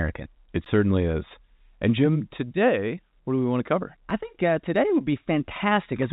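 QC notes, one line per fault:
Throughout: clock drift between sender and receiver. The sending clock runs fast by roughly 4 percent, so the jitter buffer keeps overfilling. Unlike random network jitter, the timing hiccups all lean one way and never settle, recurring unevenly across the whole clip.
0.01 to 6.07 s: repeated timing corrections. To stay in step, the receiver keeps discarding short slices of audio, consistent with the sender playing at 104 percent speed. Each cut is tiny, heard as faint skips or a slightly unsteady tempo rather than clean dropouts.
0.65 s and 4.1 s: underrun with held sample. The output buffer briefly ran empty, 15 ms and then 5 ms, and the converter held its last value, so the waveform flattens. Essentially no audio was lost, so playback resumes where it stopped with only a soft edge, not a sharp click. The G.711 A-law call path band-limits everything to 4 kHz.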